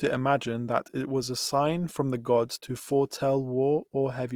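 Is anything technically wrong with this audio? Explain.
Yes. Opus compression runs through the whole clip, and the damage is plainly audible: the speech sounds grainy, rough and noisy even though its full bandwidth remains. This likely comes from the encoder keeping each band's energy while filling missing detail with folded or noise content, which fits Opus music mode near 24 kbps.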